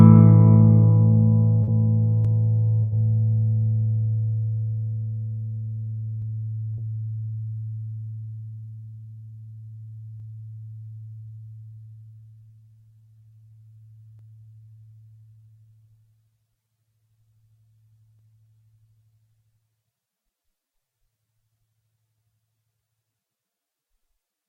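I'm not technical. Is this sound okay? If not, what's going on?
No. There are three kinds of problems.

Short concealed packet loss, at 1.63 to 1.69 s and again at 6.74 to 6.79 s: about 40 ms of audio never arrived in time, so the receiver patched each hole by stretching the sound just before it. You hear a quick smear or wobble.

Burst of packet loss, at 2.83 to 2.94 s: a bigger chunk, about 80 ms, went missing. The patch carries the last sound on as a held buzz or fading hiss, then the audio jumps ahead with that bit gone.

Clock drift buffer slips: from 2.25 s to 22.19 s there's a regular click or pop every 4 seconds, about seven in all. The likely cause is two devices ticking at slightly different speeds, so every so often a tiny sliver of audio gets dropped or repeated.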